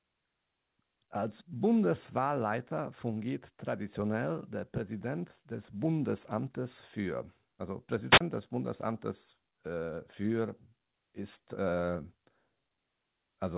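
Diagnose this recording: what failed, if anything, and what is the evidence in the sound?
At 8.10 s a short burst of hiss swells up, the speech drops into a hole of near silence about 30 ms long, and it returns by 8.21 s. That is a wireless microphone squelch dropout in the analogue radio link ahead of the converter: the FM carrier faded, noise briefly rose through the receiver, and its squelch muted the output until the signal recovered. The narrowband call path, with nothing above 4 kHz, carries the event as it came.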